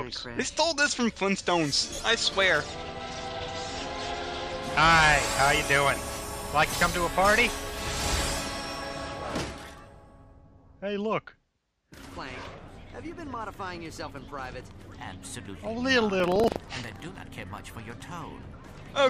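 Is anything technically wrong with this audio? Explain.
Yes. From 16.16 to 17.06 s there is buffer tearing: write and read positions cross each 40 ms period, splicing in a small slice of audio about 70 ms old, producing a 25 Hz rattle.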